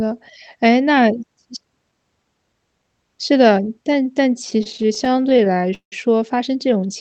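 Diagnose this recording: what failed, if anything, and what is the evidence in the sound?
Repeated stalls (stutter) at the network and jitter-buffer stage, 4.50–5.93 s: 24 holds, the longest 175 ms, add about 0.4 s with nothing lost. Late packets emptied the buffer, so the last sound was stretched, fading in longer waits. Spectrogram shows frozen horizontal smears; waveform shows repeated cycles and dips.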